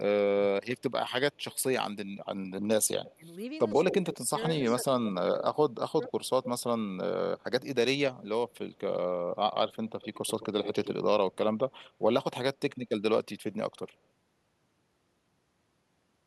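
Echo leak appears at 1.52 s, 3.05–4.43 s, 5.4–6.63 s, 8.49–8.79 s and 9.73–11.91 s. A delayed copy of the speech trails by about 80 to 120 ms. It is likely a loudspeaker echo the far end's canceller missed. It is faint at first, loud near 3 s, and faint again near 8.5 s.

Speech is suppressed in double talk between 3.16 and 6.07 s. The speech dips in pieces, by up to about 20 dB and for under a second in total. The likely cause is the canceller turning down its own talker along with the loudspeaker echo.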